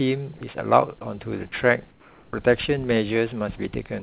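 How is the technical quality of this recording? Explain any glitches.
The recording has three short glitches tied to the call's voice detection, and nothing in it reaches above 4 kHz, which fits a G.711 narrowband call path.

At 0.38 to 0.41 s, the sound drops for about 30 ms. This is sound dropped by the voice detector. The detector likely judged the sound as background and stopped sending. The receiver filled the gap with flat comfort noise, losing about 20 ms of real sound.

From 1.91 to 2.33 s, the background is replaced by comfort noise. The sender likely paused transmission during the quiet stretch. The receiver synthesised a steady, featureless hiss instead of the real room sound. It sits about 5 dB quieter than the surrounding background.

At 2.31 s, the sound comes back with an onset clipped by the voice detector. The detector was likely slow to register the restart. About 20 ms was never sent. 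The sound begins abruptly, missing its soft start, straight out of the comfort noise.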